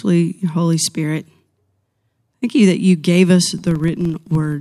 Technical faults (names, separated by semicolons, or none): filter restarted on every block